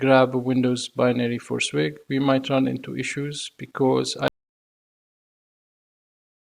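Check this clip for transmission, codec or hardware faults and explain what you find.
One fault is present: an audio dropout to silence from 4.28 s to the end. The sound cuts off abruptly and never returns, leaving about 2.2 s of dead digital silence with no room tone. The input was likely lost, through a disconnected device or failed link, while zeros kept being written. On a waveform the trace collapses to a flat line; a spectrogram shows a clean vertical edge and then uniform black.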